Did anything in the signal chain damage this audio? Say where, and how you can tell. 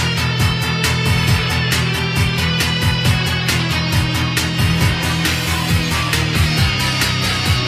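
No, nothing in the signal chain has audibly damaged this audio. At no point does the sound carry a mark left by any stage between capture and playback.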